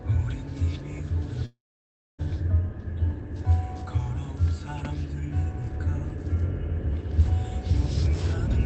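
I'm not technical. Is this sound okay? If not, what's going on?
No. From 1.45 to 2.20 s the sound breaks off. There is a short fading buzz, then silence, and the sound resumes with that moment missing. This is likely a long network dropout, where the call connection briefly stopped delivering audio.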